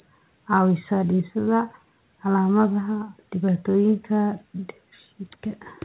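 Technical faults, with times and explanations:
No technical faults detected in this speech; the call path's narrowband codec carries it with nothing above about 4 kHz, as that path is expected to.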